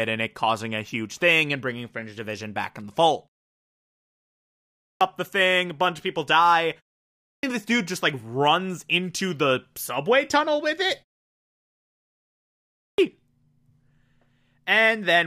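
The output device is dropping into a sleep state during silence and taking time to wake, which produces a clipped start after a pause in this speech clip. Three times the opening of the sound is swallowed: 4.61 to 5.01 s after a 1.4 s pause, 7.05 to 7.43 s after only 0.32 s, and 12.61 to 12.98 s after 1.65 s. Each time, roughly 0.37 to 0.40 s is lost, so speech resumes abruptly without its first sounds.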